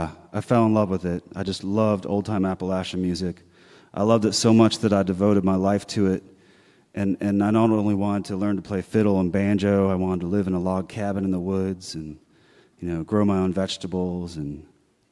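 No technical faults can be heard anywhere in this speech recording. There is no moment in it that calls for comment.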